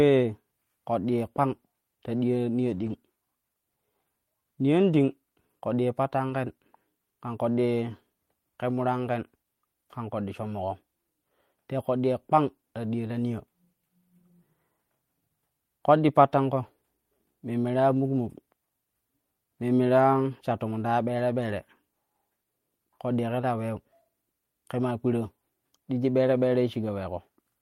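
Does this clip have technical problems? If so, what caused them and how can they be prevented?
Yes. Lost packets rebuilt from error correction at 2.73–2.91 s and 6.29–6.35 s sound briefly rough and noisy, not silent or smeared, because the following packets carried low-bitrate copies. Preventing the loss with a steadier network path or a larger jitter buffer avoids these rebuilt frames.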